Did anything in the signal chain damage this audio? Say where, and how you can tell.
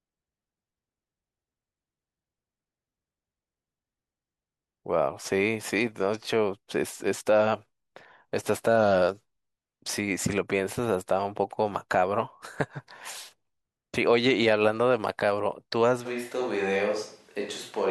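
Yes: at 16.07 s the speech suddenly turns roomy and hollow, thinner, about 5 dB quieter, with room noise about 35 dB down, to the end. That's likely a switch to a distant microphone after the close mic dropped out.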